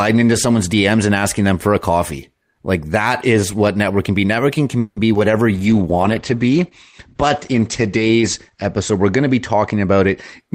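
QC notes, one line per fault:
4.79–4.98 s, call audio freeze: the last sound is drawn out for about 170 ms as a fading buzz or hiss and ends in about 50 ms of silence. Speech then resumes exactly where it stopped, so nothing is lost, but the delay grows by 170 ms. The likely cause is held-up packets draining the jitter buffer.
5.14–5.17 s, short concealed packet loss: just after "can be", about 20 ms of audio never arrives in time. The decoder extends the preceding sound for about 10 ms and blends it back into the real signal, which is heard as a brief smear or wobble at that point.
5.55–10.45 s, call bitrate drop: the encoder rate falls from 32 kbps to 11 kbps and stays at its lowest for about 2.9 s. Audio bandwidth narrows from 20 kHz to 8 kHz, so the speech sounds muffled and the coarser coding adds a rough, watery texture.
10.17–10.49 s, jitter buffer speed-up: the receiver trims pitch-period-sized pieces from a backlog of buffered audio, removing around 50 ms in total. 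The speech plays at 114% speed with its pitch unchanged, so this closing stretch sounds hurried.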